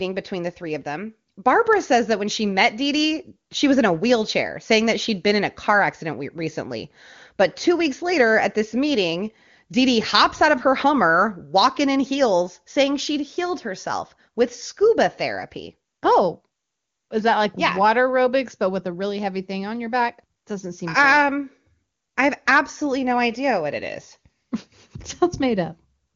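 Speech carried over an AMR wideband (HD Voice) path at 23.85 kbit/s, with content topping out near 7.2 kHz as that codec delivers, and no technical faults to report.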